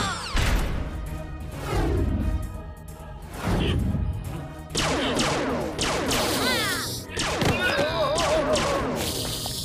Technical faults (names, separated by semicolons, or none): none